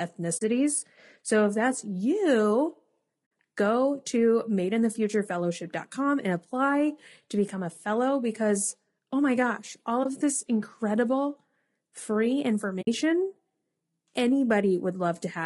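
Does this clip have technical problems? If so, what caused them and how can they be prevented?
Yes. The speech is rough and grainy throughout, likely from low-delay AAC compression (AAC-ELD) at a low bitrate, around 32 kbps. On a spectrogram, noise fills the gaps between harmonics and the top band looks smeared or synthetic. Encoding at a higher bitrate would prevent this.

There is AAC frame loss with muting at 0.37–0.42 s, 3.57 s, 10.03–10.07 s and 12.81–12.88 s. These are soft dropouts of about 40, 60, 20 and 60 ms. The waveform shows each as a short gap with tapered edges, and the spectrogram shows a blank vertical strip. A more reliable network link, or forward error correction, would prevent them.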